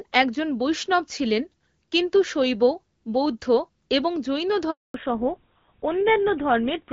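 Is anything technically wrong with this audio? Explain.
Yes, there are two faults. At 4.70 s, right after "শৈব বৌদ্ধ এবং জৈন", a handover gap cuts the speech for 240 ms, until 4.94 s. No frames arrive while the call switches networks, so the sound fades within a few tens of milliseconds to true silence. Unlike a packet-loss glitch, there is no concealment buzz or repeated fragment, just a clean hole.

From 4.94 s to the end, a fallback to narrowband takes over. The call drops from the clear HD Voice sound before the gap to a codec that points to GSM full rate, and nothing above 4 kHz remains. The speech turns duller and rougher. Unlike a simple low-pass filter, the change lands exactly at the handover and brings added coarseness along with the lost treble.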